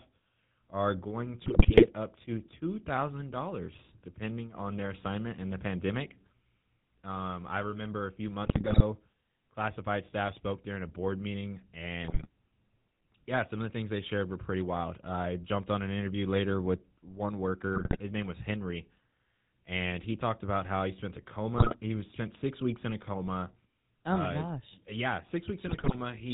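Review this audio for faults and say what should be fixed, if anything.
GSM full-rate codec damage runs through the whole clip. The audio has a buzzy, gravelly roughness and nothing above 4 kHz, which fits 13 kbps full-rate coding. The codec rebuilds the sound from a vocal-tract filter driven by a sparse, regularly spaced pulse excitation. To prevent this, capture or route the call over a wideband or higher-rate codec.

GSM bit errors occur at 1.46–1.92 s (between "are going" and "up to"), 8.44–8.83 s (after "I remember a few"), 12.04–12.27 s, 17.75–18.01 s, 21.54–21.77 s (after "how he spent a") and 25.66–25.95 s. Corrupted filter, pitch or gain values reached the decoder, so the sound breaks into squawks, pops and gargling bursts. To prevent this, use a stronger radio link or error concealment that mutes corrupted frames.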